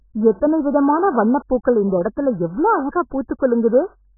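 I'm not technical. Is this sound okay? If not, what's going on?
No. The speech sounds muffled and smeared from start to finish, with nothing above 1.7 kHz, so it's dull and watery. That's likely heavy AAC compression, where the file was squeezed so hard that the crisp, bright parts of the sound got thrown away.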